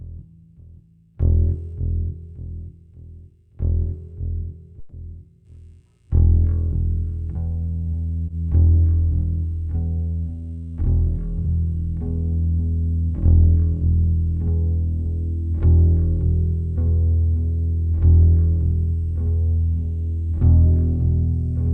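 A call audio freeze runs from 4.79 to 4.94 s. The sound stops moving forward and the last moment is stretched out as a buzzy or hissy tail that fades over about 130 ms, with no true silence. The likely cause is packets stalling in transit until the jitter buffer drained, so the receiver extended what it already had. When delivery resumed, playback picked up where it left off. Nothing was lost, but everything after shifts about 130 ms later.

Short concealed packet loss occurs between 8.26 and 8.30 s. Around 20 ms of audio never reached the decoder in time. The receiver bridged the hole by carrying the preceding sound forward and then crossfading back into the real stream. The result is a brief smear or wobble where that slice of sound should be, rather than an audible gap.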